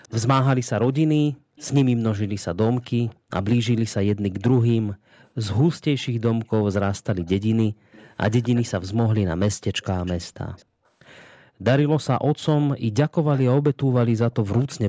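An echo leak, likely from a loudspeaker whose echo canceller let part of the speech slip back, returns a faint copy 255 ms late at 0.03–0.15, 1.56–1.66, 3.07–3.6, 4.59–8.71, 9.81–10.65 and 12.44–14.65 s. It sits roughly 20 to 30 dB below the speech and is strongest in the final stretch.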